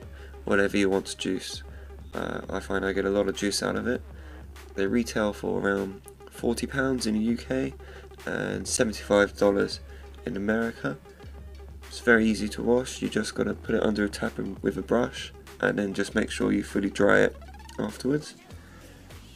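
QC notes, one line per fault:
2.11 s, 8.77 s: block of digital silence. At each point the signal drops to zero for about 11.6 ms and then resumes without any fade, which fits a 512-sample output buffer that was not filled in time. The abrupt edges produce a short tick rather than an audible hole. On the waveform, each event is a flat line with vertical jumps at both ends. On a spectrogram, each is a thin empty column bounded by broadband vertical streaks.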